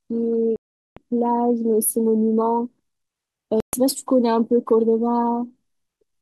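A speech clip with the sound cutting out abruptly twice, from 0.56 to 0.97 s (about 405 ms) and from 3.60 to 3.73 s (128 ms), each resuming further on as if it had kept playing. Both gaps are likely Bluetooth dropouts, where late packets were discarded.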